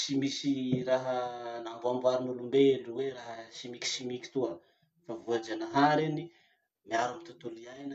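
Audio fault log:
No faults detected.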